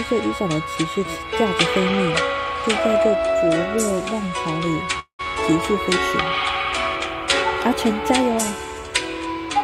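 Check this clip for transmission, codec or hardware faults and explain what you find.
There is one fault, a call audio freeze from 4.99 to 5.21 s. The last sound is stretched into a fading buzz that falls to about 100 ms of silence, most likely a jitter buffer running dry while packets were held up. Playback then resumes where it stopped, nothing lost but 196 ms later.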